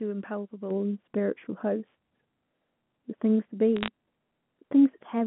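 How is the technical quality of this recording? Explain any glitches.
The speech has two faults laid over a telephone-band path whose 150 Hz to 3.5 kHz limits are audible as the usual narrow phone timbre: a lasting treble loss from early on, and a brief burst of digital crackle near the end.

From 0.71 s to the end, de-emphasis has been applied wrongly. A treble-cutting filter meant to reverse a pre-emphasis boost has acted on audio that never had one, or has been applied twice, so the response tilts smoothly downward with frequency, about 11 dB lower at 10 kHz than at 1 kHz. The voice turns dull and muffled. Unlike a low-pass cutoff, there is no sharp edge: the top fades gradually, and everything stays present, just darker.

Between 3.77 and 3.88 s there are bit errors on a digital phone line. Flipped bits in the G.711 A-law stream each corrupt a single sample. When a sign or high-order bit is hit, that sample jumps far from its neighbours and makes a sharp tick. 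With an error rate of roughly a few tenths of a percent across a handful of frames, the ticks cluster into a short crackle while the speech underneath stays intact. Packet loss would instead drop or smear whole stretches of sound.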